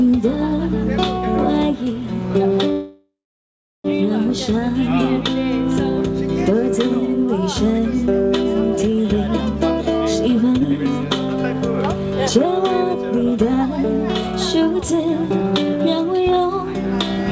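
A call recording with no content above 8 kHz, which fits a wideband call codec such as G.722, shows three kinds of faults. From 2.72 to 3.86 s a call audio freeze inserts about 1.12 s of filler: the last sound is carried on as a fading buzz or hiss and then drops to silence for about 0.7 s before the audio resumes where it stopped. Nothing is lost, but everything after it arrives late by that amount. The likely cause is packets held up in transit until the jitter buffer ran dry. Jitter buffer speed-up occurs three times, at 9.90 to 10.51 s (106 %, about 40 ms removed), 12.36 to 13.79 s (107 %, about 100 ms removed) and 14.27 to 16.72 s (108 %, about 200 ms removed). In each case the receiver trims short pitch-period-length pieces in quick succession to shrink an overfilled buffer, so the sound runs faster at unchanged pitch and comes across as hurried. Between the first two speed-ups, at 10.60 to 10.62 s, a skip ahead drops roughly 0.3 s of audio. 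Playback jumps forward with only a couple of milliseconds of fill, so the material on either side is spliced almost directly together, with a gap in content but no audible pause.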